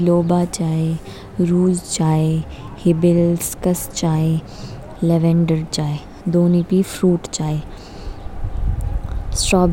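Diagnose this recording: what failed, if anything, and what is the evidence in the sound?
Nothing in the signal chain appears to have failed: across the whole speech recording, no stage from capture through conversion, processing, transmission, storage or playback leaves an audible mark on the signal.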